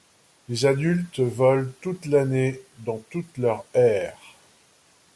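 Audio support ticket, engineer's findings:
Listened through the speech clip and found nothing wrong, so there's nothing to chase on this ticket.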